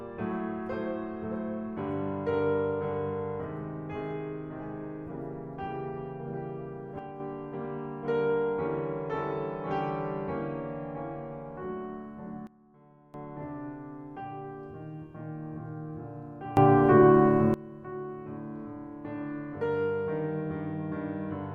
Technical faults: sudden gain jump

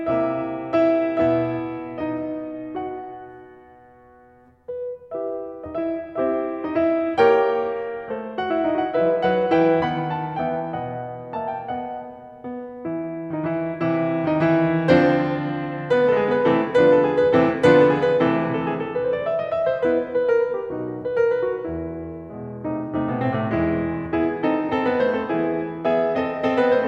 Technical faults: none

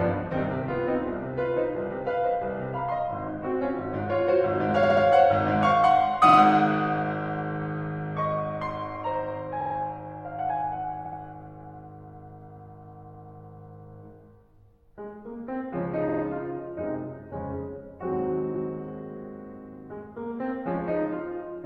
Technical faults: repeated frames

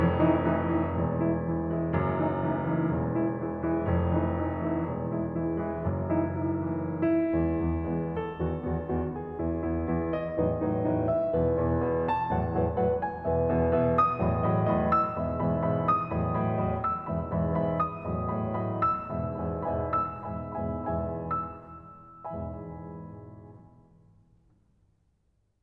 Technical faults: none

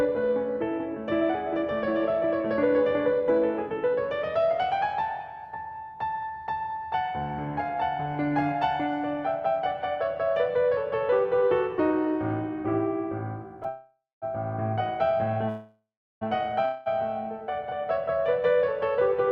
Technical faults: call audio freeze; jitter buffer speed-up

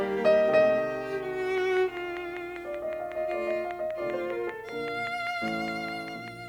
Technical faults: train of clicks

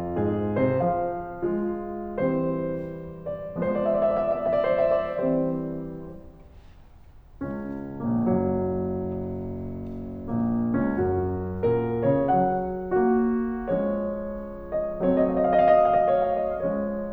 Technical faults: none

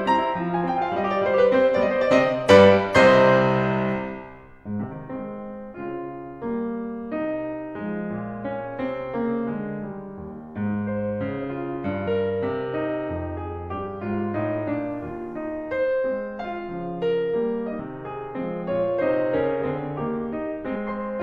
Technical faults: compressed frames skipped

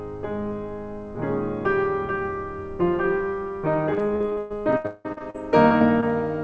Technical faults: repeated packet loss (robotic sound)

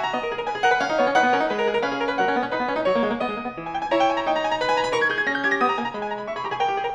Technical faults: audio read two samples at a time (double speed)

